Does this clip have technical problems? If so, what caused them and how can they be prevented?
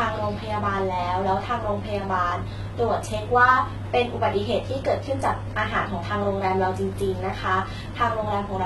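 Yes. HE-AAC compression damage runs through the whole speech clip, and that codec is the likely cause. Nothing is present above 11.8 kHz. The treble that remains is not the original. It is rebuilt from lower bands copied upward, so its harmonics fail to line up with those below. The s sounds come out gritty, metallic or lispy. The damage is heavy, which fits a very low bitrate near 16 kbps. To prevent it, encode at a higher bitrate, or use plain AAC or Opus.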